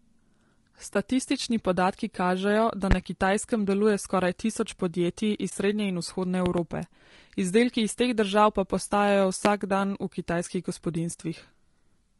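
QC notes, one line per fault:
throughout: low-delay AAC compression, likely AAC-ELD at a low bitrate near 32 kbps; the low bitrate leaves noise between pitch harmonics, making the speech plainly rough, grainy and dull-topped.
0.93 s and 5.49 s: AAC frame loss with muting; a lost frame's spectrum is zeroed, so overlapping windows fade the speech into a soft 20 ms gap.
2.91 s, 6.46 to 6.61 s, 9.45 s: loud pop, likely a voltage step or pulse; sharp pops about 15 to 20 dB above the speech, a double pop at 6.46 s, with speech continuing underneath.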